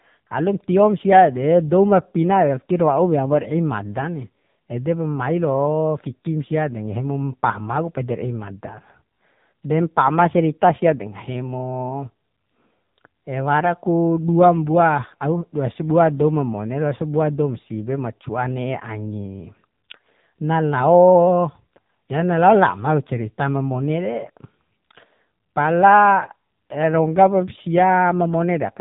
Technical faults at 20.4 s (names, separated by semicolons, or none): AMR narrowband mobile codec